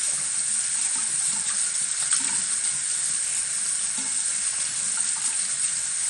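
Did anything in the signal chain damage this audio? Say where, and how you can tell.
Yes, at the codec stage, and for the whole clip: the top end stops dead at about 11.3 kHz, what remains sounds dull, and a gurgling, granular distortion is plainly audible. The cause is likely MP2 compression at a starved bitrate, consistent with roughly 48 kbps. MPEG Layer II divides the spectrum into 32 sub-bands, and with too few bits it switches upper bands off and quantises the rest coarsely. A spectrogram would show a flat ceiling near 11.3 kHz and bands flickering beneath it.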